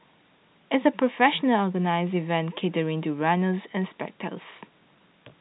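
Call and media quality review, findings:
No faults found; telephone-band speech, nothing above 3.9 kHz.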